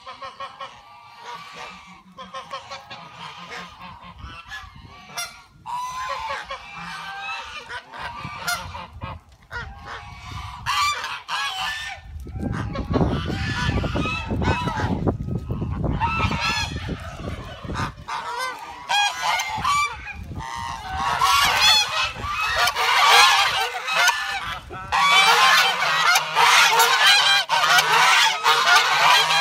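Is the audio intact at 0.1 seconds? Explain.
Yes, the audio is intact at 0.1 seconds, with no dropout, distortion or other fault audible at that point.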